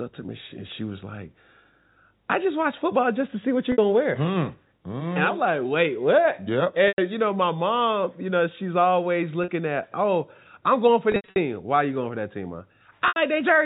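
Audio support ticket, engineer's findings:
Packet loss with pitch repetition, five dropouts: 3.72 s (60 ms), 6.88 s (100 ms), 9.44 s (40 ms), 11.12–11.36 s (180 ms scattered, longest run 80 ms), 13.08 s (80 ms). Short gaps held, buzzy. Longer ones fade toward silence before speech cross-fades back. Receiver concealment loops last pitch period. Gap sizes fit 20 ms packets. G.711 telephone band intact, nothing above 4 kHz.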